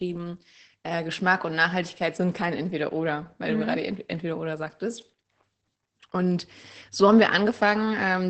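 Throughout, the speech sounds muffled, hoarse and slightly robotic, with nothing heard above 8.6 kHz. This is Opus voice compression running its SILK linear-prediction coder in wideband mode, coarsely coding the excitation at a low rate that fits about 12 kbps.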